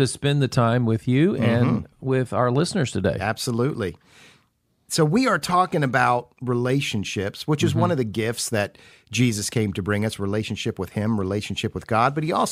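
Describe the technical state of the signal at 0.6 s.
The signal at 0.6 s is intact, with no fault audible at that point.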